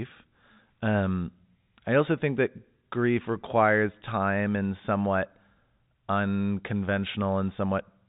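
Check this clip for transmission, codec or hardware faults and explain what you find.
No transmission, codec or hardware faults can be heard in this speech; it comes across as ordinary telephone-band audio of the kind G.711 A-law coding produces, with nothing above about 3.8 kHz and any quantisation grain from the coding kept faint.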